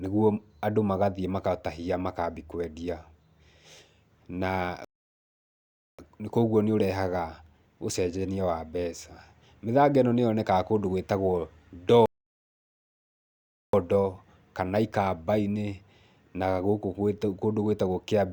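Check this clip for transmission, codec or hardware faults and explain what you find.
The speech has two playback stalls. From 4.85 to 5.99 s, and again from 12.06 to 13.73 s, it cuts to silence mid-flow for about 1.1 s and 1.7 s. The player likely ran short of data, or its thread was blocked.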